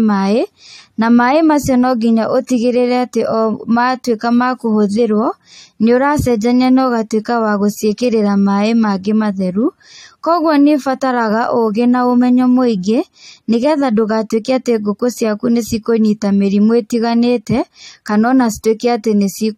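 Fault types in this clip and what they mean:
Pre-echo: codec noise smeared ahead of a sharp attack at 2.47 s, a short hiss about 19 ms long; on a spectrogram, broadband haze just before the onset.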